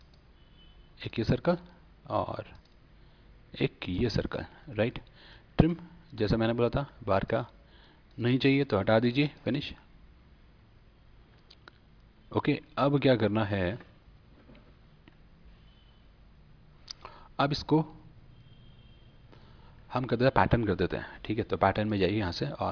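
No technical faults can be heard anywhere in the audio, and the signal holds steady and continuous throughout.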